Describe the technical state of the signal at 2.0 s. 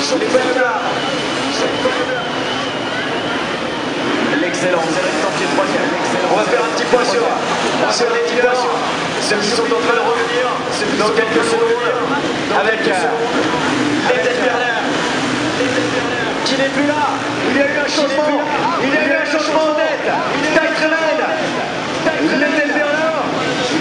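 A doubled audio track is present at 2.0 s, as it is throughout the clip. A second, full-band copy of the same sound runs about a second and a half behind the original and a few decibels quieter, with no decay or room colouring of its own. The likely cause is the signal being captured twice, once through a slower path, so that each event is heard again as a flat, distinct repeat.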